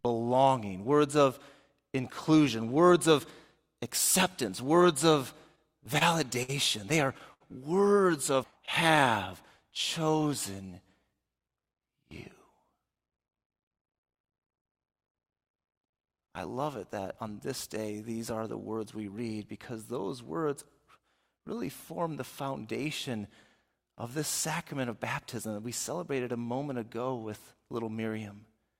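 Between 5.55 and 6.03 s, packets kept arriving late and the jitter buffer ran dry four times, producing repeated stalls (stutter). The receiver extended the last sound to cover about 54 ms in all, with the longest gap 27 ms. Nothing is lost, but the audio catches and drags.

A late packet then causes a short stall at 6.43 to 6.50 s, where the buffer emptied and 55 ms of held sound filled the wait. Another follows at 7.33 to 7.42 s, lasting 69 ms. Each time the sound hangs briefly with a slight buzz or dip before resuming where it stopped.

From 8.51 to 9.29 s, scattered short gaps appear as roughly five packets were lost or late. Each small hole was patched by continuing the preceding sound, around 50 ms in total and none much beyond 15 ms. The result is a string of brief ticks and smears.

A jitter buffer slow-down runs from 9.63 to 11.16 s. To rebuild its reserve, the receiver repeated pitch periods and slivers of pauses, adding 142 ms. 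Playback drops to 91% speed with unchanged pitch, so sounds stretch out.

From 13.00 to 16.23 s, a jitter buffer speed-up occurs because the buffer held more audio than it aims for. The receiver trimmed short pieces repeatedly, removing roughly 300 ms. The audio runs at 108% speed without any pitch change and sounds hurried.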